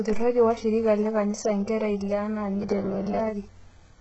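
Throughout, the audio carries heavy HE-AAC compression, likely at a very low bitrate around 8 kbps. Nothing sounds above 8 kHz, and the treble below that has a gritty, metallic, copied-upward quality rather than a clean cutoff.

From 2.56 to 3.19 s, just after "kanisa nkera ile enaa", a rigid 100 Hz robotic buzz appears. It likely comes from repeated 10 ms buffers replacing about half the audio, and it is a fixed-pitch drone rather than codec grit.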